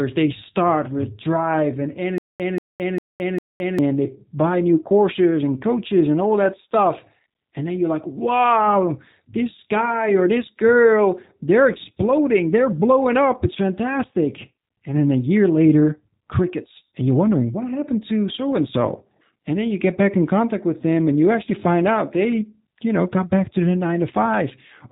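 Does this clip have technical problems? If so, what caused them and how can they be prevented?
Yes. The whole recording carries G.729 codec damage: nothing above about 3.8 kHz survives, and the speech sounds plainly rough and synthetic, consistent with 8 kbit/s G.729A rebuilding each frame from a filter, pitch predictor and few pulses. Prevent it by using a wideband codec.

From 2.18 to 3.79 s, between "start with drive and" and "they buy new courses", there is a stutter with silent gaps: a 185 ms fragment repeats four times, each followed by 216 ms of digital silence, a 401 ms cycle. The likely cause is a stalled stream replaying its last buffer on each retry. Larger jitter buffers prevent it.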